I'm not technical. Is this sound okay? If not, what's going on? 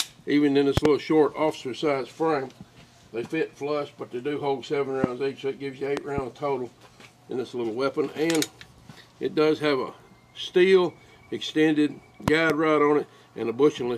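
No. Loud pops at 0.77–0.88 s, 5.04–5.06 s, 5.97–6.20 s and 12.28–12.52 s, all but the second heard as double thumps. A sudden electrical jolt, likely from a plug, switch or static, lands on top of the sound.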